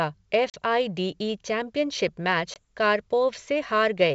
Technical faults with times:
0.50-0.55 packet loss on an ADPCM call
2.54-2.57 packet loss on an ADPCM call

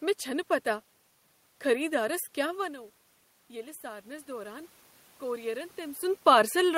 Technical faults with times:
3.48-6.06 automatic gain rising

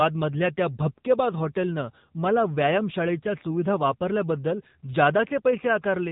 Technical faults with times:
0.00-6.11 AMR narrowband mobile codec

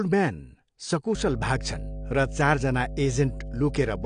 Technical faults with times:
0.00-4.05 AAC compression
1.15-4.05 mains hum

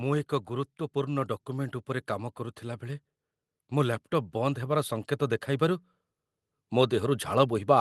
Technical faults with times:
0.47-3.10 automatic gain rising
3.69-5.87 automatic gain rising
6.70-7.80 automatic gain rising

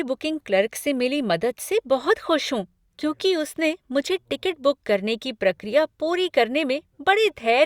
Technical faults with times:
none

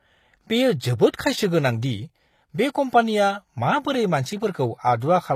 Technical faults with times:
0.00-5.36 HE-AAC compression
5.00 pre-echo

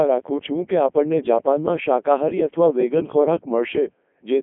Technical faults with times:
0.00-4.42 Codec 2 vocoder

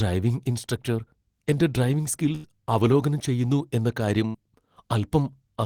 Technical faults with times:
2.35-2.49 burst of packet loss
4.27-4.37 burst of packet loss

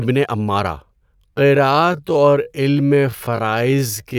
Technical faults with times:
1.12-4.19 time-stretched section

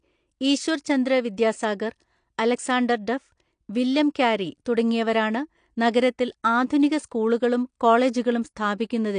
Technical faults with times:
0.00-9.19 AAC compression

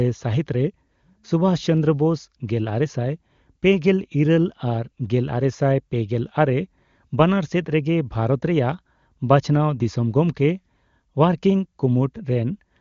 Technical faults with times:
none

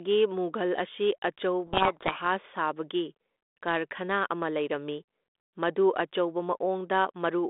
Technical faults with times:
1.66-2.19 codec payload misread

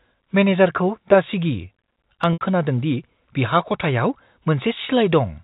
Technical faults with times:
2.33-2.41 packet loss with pitch repetition

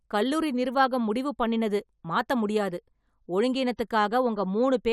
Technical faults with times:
none

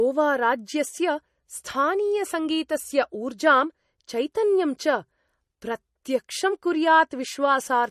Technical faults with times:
0.00-7.90 MP3 compression

